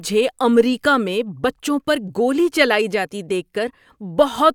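No technical faults can be heard anywhere in this speech recording; the signal stays continuous and stable throughout.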